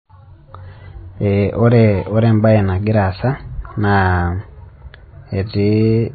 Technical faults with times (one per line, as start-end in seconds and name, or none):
0.00-6.15 MP3 compression